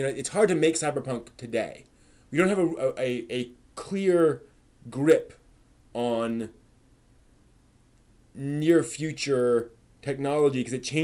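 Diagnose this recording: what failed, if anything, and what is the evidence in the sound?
The sample-rate conversion stage failed: the resampler restarted on every block. There's a steady tick at 10 Hz running the whole way through, only while sound is present. That fits 100 ms blocks, each converted in isolation, perhaps 24 to 48 kHz, so every block edge carries a small error.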